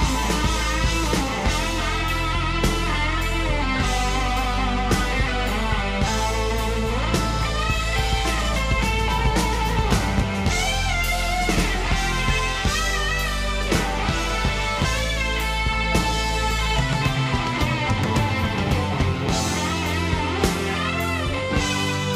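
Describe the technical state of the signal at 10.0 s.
At 10.0 s the signal is intact, with no dropout, distortion, glitch or other audible fault at that point.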